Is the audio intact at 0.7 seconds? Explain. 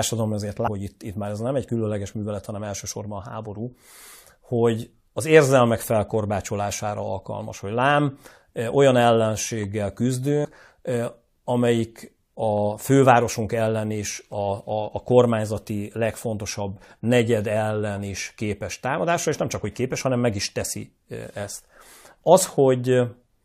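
No. Compressed frames are skipped at 0.66 to 0.68 s. About fifteen frames of roughly 23.2 ms each are not played, so around 400 ms of speech is lost. The sound jumps ahead at the join.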